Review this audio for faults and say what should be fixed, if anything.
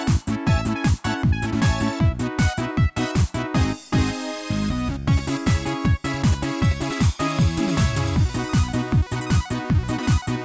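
Nothing needs fixing, as no technical faults can be heard anywhere in the signal.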